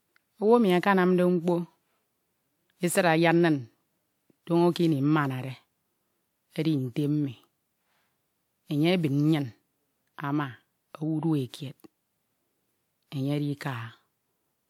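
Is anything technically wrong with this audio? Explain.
Yes. Throughout, the speech sounds swirly, smeared and hollow, with blurred attacks, despite content reaching about 20.1 kHz. This is likely generation loss from repeated re-encoding, roughly four WMA passes at around 128 kbit/s.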